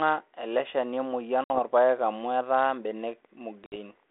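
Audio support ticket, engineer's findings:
Packet loss on an ADPCM call at 1.44–1.59 s, before "amu etaa", and 3.66–3.77 s. Hard-edged gap of about 60 ms, a few packets' worth. Decoder predictor and step size lose sync, so audio resumes with brief distortion. Band-limited telephone sound points to 32 kbit/s G.726.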